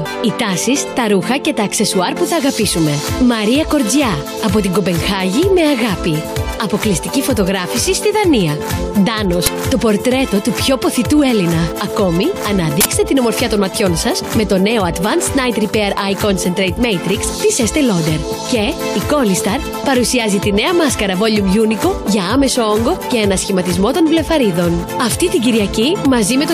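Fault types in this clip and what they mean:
Uninitialised buffer: leftover memory played as audio, giving a harsh crack at 9.46 s and a noise burst at 12.81 to 12.85 s, fitting 512- and 2048-sample blocks.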